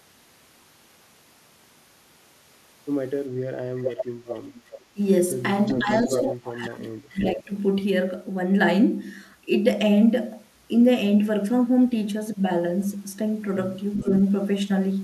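From 3.81 to 4.06 s and again from 4.29 to 4.81 s, a delayed copy of the speech trails the talker by about 0.4 s. This is echo leak, most likely from a loudspeaker on the far end whose echo canceller let part of its microphone pickup return. It recurs at 5.66 to 6.22 s, 6.62 to 6.87 s, 7.2 to 7.29 s and 13.94 to 14.1 s, with the delay holding near 400 ms. On a spectrogram it shows as a fainter duplicate of the harmonic pattern, shifted right by that fixed lag, ranging from nearly as loud as the speech to barely visible.

Between 4.93 and 5.0 s, and across 5.78 to 7.52 s where it overlaps the returning echo, the loudspeaker side's speech is pushed down in chunks. That is speech suppressed in double talk: the canceller, likely unable to tell local speech from the echo, attenuated both. The drops reach about 25 dB, adding up to roughly a second in total, and appear as abrupt notches in the waveform envelope and blank or thinned upper bands in the spectrogram.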